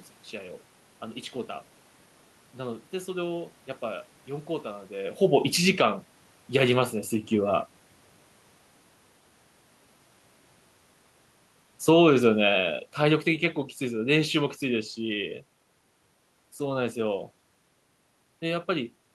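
A speech recording with room noise underneath, whose level sags partway through because of automatic gain falling. From 11.74 s to 15.32 s the gain control, having judged the input too loud or its background noise too strong, pulls its gain down gradually by about 6 dB, so the voice and the room noise sink together. On a waveform the envelope tapers smoothly across those 3.6 seconds. On a spectrogram every band, noise floor included, dims evenly rather than the speech alone fading. The level shifts near 5 s and 19 s come from the talker moving relative to the microphone, not from the system.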